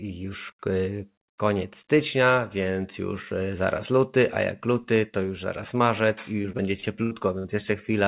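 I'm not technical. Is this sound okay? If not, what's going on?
No. Repeated packet loss (robotic sound) runs from 6.42 to 7.46 s, right after "już zaraz marzec i": seven dropouts were patched by stretching the previous sound, making the speech choppy with pieces missing.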